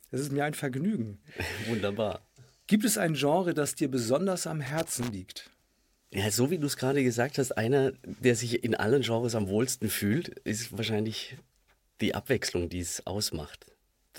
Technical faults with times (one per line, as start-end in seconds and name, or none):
4.66-5.10 loose connector crackle